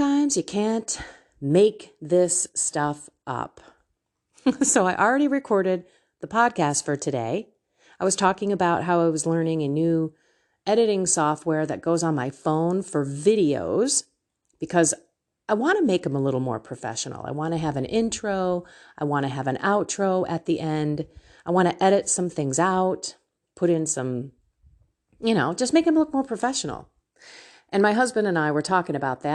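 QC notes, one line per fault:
No faults heard anywhere in the speech.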